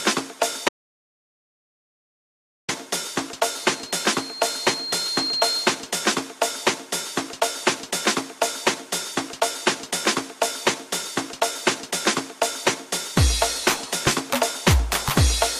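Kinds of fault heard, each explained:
Audio dropout to silence: The input signal was likely lost while the recorder kept writing silence, so from 0.69 s to 2.69 s the sound cuts out into two seconds of silence, with no room tone, and whatever happened then is missing.
Loudspeaker feedback squeal: A microphone is hearing the loudspeaker it feeds, and at one frequency the loop gain exceeds one. From 3.49 s to 5.93 s a 4.2 kHz tone swells over about two seconds until it is roughly as loud as the sound itself.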